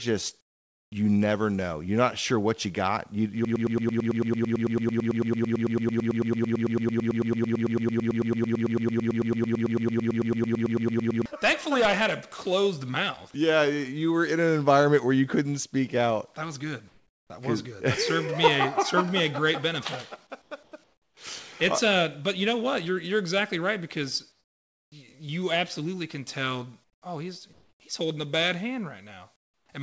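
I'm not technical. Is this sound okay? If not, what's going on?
No, there are three kinds of problem in it.

The biggest is a broken-record loop from 3.45 s to 11.26 s. A tiny piece of sound, about a tenth of a second long (111 ms), repeats back to back roughly seventy times, giving a stuttering, machine-gun effect for nearly eight seconds. The likely cause is that the player or stream stalled and kept replaying the last fragment it had, so whatever should have played in that stretch is simply gone.

There is also comfort noise in place of the background at seven points: 0.41 to 0.92 s, 16.88 to 17.30 s, 20.42 to 21.17 s, 24.32 to 24.92 s, 26.84 to 27.02 s, 27.53 to 27.80 s, and 29.36 to 29.69 s. In these pauses the real background disappears and a flat, featureless hiss takes over, noticeably quieter at 0.41 s and in several later gaps. This is likely the sending side switching off during quiet moments, with the receiving side filling the gap with artificial noise.

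At 0.9 s, the end of that first gap, the onset is clipped by the voice detector. The sound returns with a hard, abrupt start because its first 20 ms are missing. The likely reason is that the sender's detector was a moment slow to notice sound had resumed, so that opening sliver was never sent and filler noise played instead.

The audio came through a call connection, which is why everything above 8 kHz is cut off.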